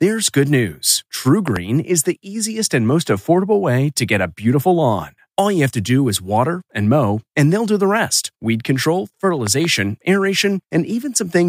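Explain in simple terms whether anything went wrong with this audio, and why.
Yes: a loud pop, twice, each a quick double thump, at 1.48 to 1.58 s and 9.47 to 9.67 s. It is likely an electrical jolt, such as a plug or switch. Unlike a dropout, the speech carries on underneath without any gap.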